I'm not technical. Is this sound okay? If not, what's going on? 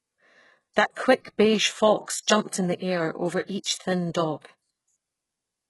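No. Throughout, the speech has a gritty, metallic edge, and s sounds come out lispy, with nothing above about 11.5 kHz. That is likely HE-AAC compression, which keeps only the lower sounds and fakes the treble by copying them upward, so it never quite matches.

At 3.63 s, just after "in the air over", a short hiss comes a split second before a sharp sound, which lands soft and smeared. This is pre-echo: the compression spreads its noise across a short stretch, spilling into the quiet moment before the attack.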